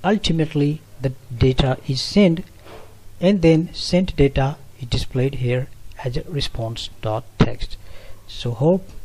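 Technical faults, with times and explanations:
No technical faults can be heard in this clip. Nothing in the audio calls for a timed entry.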